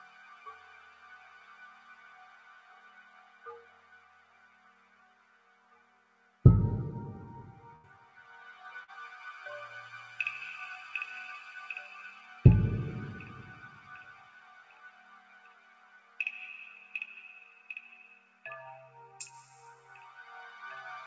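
From start to finish the level pumps and thins, with held and fading parts sinking while attacks come through, a swing of roughly 10 dB. This is a noise suppressor applied to music or sounds: speech-tuned processing treating steady content and tails as noise.

The sound cut by the noise suppressor is clearest from 0.0 to 3.46 s and from 3.64 to 6.44 s. In both stretches the sustained material drops by about 6 dB and decays end early, so the sound seems to duck away and recover rather than ring out.

At 7.76 to 7.85 s the last sound is stretched and fades out, then the audio jumps ahead. This burst of packet loss left about 80 ms missing, and the receiver covered the hole by continuing and attenuating what came before.

From 8.00 to 8.20 s another brief stretch sinks by about 5 dB. This is again the suppressor pulling down steady content, here for only a fraction of a second, so the sound dips and returns quickly.

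At 8.83 to 8.90 s there is a short smear or wobble. This is short concealed packet loss: about 40 ms never arrived in time, and the receiver filled it with a synthetic continuation before blending back into the real signal.

From 14.1 to 16.19 s and again at 18.19 to 18.44 s the sustained sound falls by about 6 dB, its tails clipped short. The suppressor is once more mistaking steady energy for noise. Throughout, the top end stops at 8 kHz, which points to a wideband call codec.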